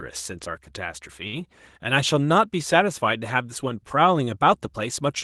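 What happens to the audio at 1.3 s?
A short stall from a late packet happens between 1.27 and 1.36 s. A packet of speech arrived late and the jitter buffer ran dry. The receiver held the last sound for about 57 ms until the data came in. It then resumed from the same point, so no speech is lost. Everything after it now runs 57 ms behind. You hear a briefly drawn-out sound with a faint buzz or dip, over the Opus call path's 12 kHz band limit.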